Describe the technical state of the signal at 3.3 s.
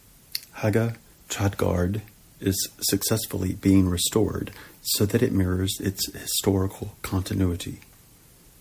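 At 3.3 s the speech signal is intact, with no dropout, distortion, or other fault at that point.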